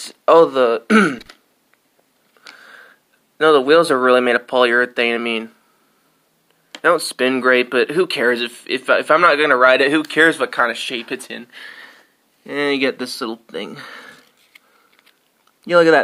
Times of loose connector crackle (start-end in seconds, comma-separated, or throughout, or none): 1.19-1.27